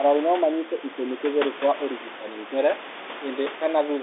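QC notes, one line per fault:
Nothing stood out on listening; the sound comes across with the narrow telephone band and low room noise expected of a call line.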